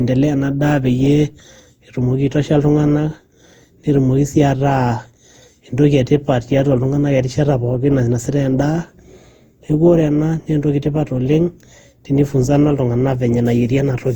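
Throughout, the speech shows generation loss: swirly, hollow, smeared, with blurred attacks, worse than one Opus pass at 64 kbit/s would give, likely from around ten re-encodes.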